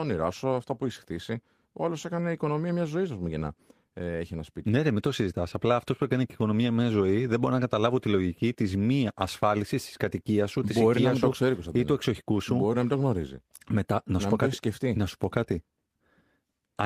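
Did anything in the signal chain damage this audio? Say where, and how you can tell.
No, nothing in the signal chain has audibly damaged this speech recording, and no stage from capture through playback leaves a trace that can be heard.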